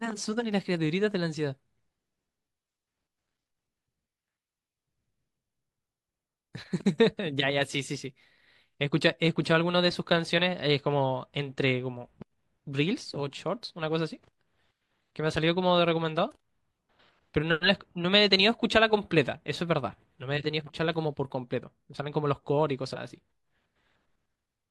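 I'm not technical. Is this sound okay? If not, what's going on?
Yes, this recording is fine. There is no technical problem to point to at any moment in it.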